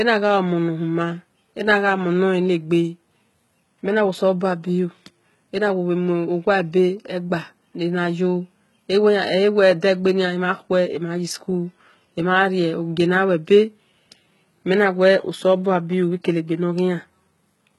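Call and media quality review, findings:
HE-AAC compression, whole clip. Speech treble synthetic; s sounds gritty and lispy. Nothing above 11.8 kHz. Likely spectral band replication: treble rebuilt from copied lower bands, harmonics misaligned across crossover. Heavy damage, fits a 16 kbps HE-AAC v2 stream.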